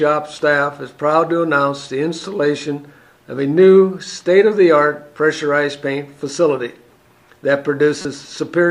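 At 8.02 s, running to 8.05 s, there is a corrupt frame decoded. Damaged bits in a few consecutive compressed frames were played out as if valid, so misread gains and codes threw energy into the wrong frequency bands for roughly 36 ms. It is heard as a short chirp or noise burst near the end. On a spectrogram it shows as a brief vertical smear of misplaced energy, and on the waveform as a sudden disturbance, with the error itself peaking around -10 dBFS.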